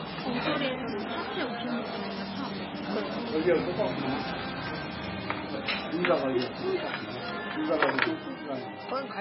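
Sounds with MP3 compression damage throughout. Nothing remains above 5.5 kHz, and weak detail swirls watery, likely from a starved encoder near 16 kbps.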